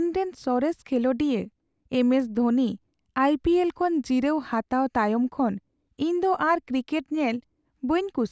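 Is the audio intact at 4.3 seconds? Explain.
Yes, at 4.3 seconds the audio is intact, with no dropout, click, distortion or other fault at that moment.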